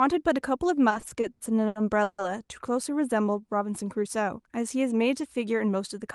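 From 0.89 to 2.20 s the speech shows repeated stalls (stutter). Packets reached the receiver late, so its jitter buffer ran dry eight times, and each time it extended the last sound until data resumed. This filled about 410 ms, nearly a third of that span, and nothing is missing. The longest wait, 150 ms, was faded. The speech drags and hiccups. On a spectrogram, the stalls appear as flat, smeared stretches where the harmonics hold still, and the longest one dims as it fades.

Between 3.25 and 3.48 s there is a jitter buffer slow-down. With its reserve running low, the receiver repeated single pitch periods over and over, adding 50 ms and playing that stretch at 83% speed with the pitch unchanged. The sound is drawn out. On a waveform, that section shows cycles repeated one after another. On a spectrogram, the formants are stretched in time but sit at the same frequencies.

From 5.46 to 5.75 s a jitter buffer speed-up does the reverse. 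The buffer held more audio than it needed, so the receiver cut out short runs of pitch periods, about 50 ms in total. The speech runs at 115% speed at the same pitch and sounds hurried. A spectrogram shows compressed, tightly packed syllables, and the waveform has small seams where cycles were dropped. Across the clip, the Opus call path's ceiling shows as a spectrogram cut-off near 12 kHz.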